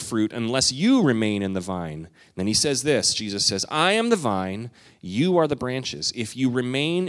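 No audible technical faults.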